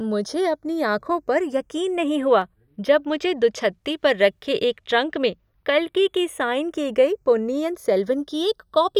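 From the start of the speech, the channels are drifting apart: the two sides run on clocks differing by around fifty parts per million, so their offset grows to roughly a fifth of a millisecond by the end. Summed to mono, comb notches creep through the spectrum as a slow flanging sweep, unlike a fixed delay's static coloration.

At 2.42 s a single sharp click cuts in, a thin vertical line across the spectrum. The likely cause is dropped samples, a fraction of a millisecond missing so the waveform jumps ahead. No sound is audibly lost, unlike a dropout gap.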